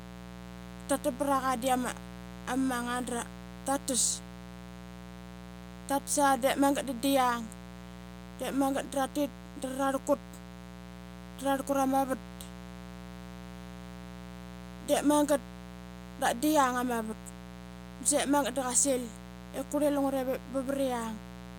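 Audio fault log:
Throughout, mains buzz: a steady, raspy buzz sits under the speech at roughly 15 dB below it, built from sharp spikes locked to a 60 Hz supply, arriving twice per cycle, so 120 Hz and a dense stack of harmonics climb into the kilohertz range, giving it that edge.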